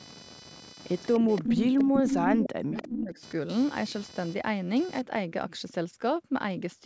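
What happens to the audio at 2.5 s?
Three faults overlap here. The first is computer activity noise, running from 0 to 5.01 s. The processor or other hardware shifts the audio circuit's shared ground as its load changes. The result is a buzz pulsing at roughly 500 Hz, sitting roughly 15 dB below the speech.

The second is speech suppressed in double talk, from 1.19 to 3.19 s. The voice sinks steeply, at its deepest by roughly 40 dB, for about two seconds. The likely cause is that both sides spoke at once. The echo canceller could not tell this talker from loudspeaker echo, so it turned both down.

The third is an echo leak, from 2.43 to 2.47 s, just before the moment asked. A brief scrap of the voice returns 296 ms late, roughly 15 dB under the speech. It likely came from a loudspeaker on one side whose echo canceller let part of its microphone pickup through.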